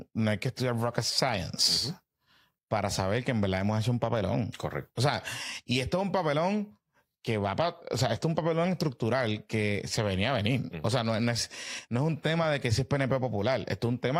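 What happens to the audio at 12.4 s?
At 12.43 s, between "es no es un" and "de que si es", the stream suffers AAC frame loss with concealment. About 43 ms of coded audio goes missing, which fits a single lost frame, and the decoder covers the gap by rebuilding it from the last good spectrum with randomised phase. Because the gap is so short, nothing fades to silence. Instead the speech turns briefly smeared and noisy, with a phasey blur before normal decoding resumes.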